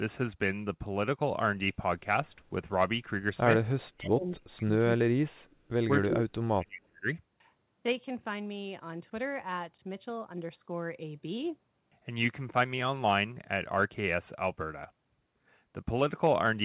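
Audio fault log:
3.95–4.72 s, 4.96–5.38 s and 6.04–7.06 s: speech suppressed in double talk. While the far side talks, the voice sinks by up to about 35 to 40 dB and nearly vanishes. The likely cause is an echo canceller that could not tell this talker from loudspeaker echo and turned both down.
4.84–4.98 s and 5.50–5.56 s: echo leak. Short scraps of the voice come back about 318 ms late, about 20 dB below the speech in the first and about 40 dB below in the second. This is likely a loudspeaker end whose echo canceller let part of its microphone pickup return.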